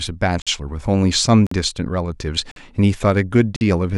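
Gaps between chunks at 0.42, 1.47, 2.51 and 3.56 s: the speech arrives in 1.0 s blocks, and each join leaves about 48 ms of silence before the next block starts. Nothing is lost, but the speech is cut by short, hard-edged holes at a steady rhythm.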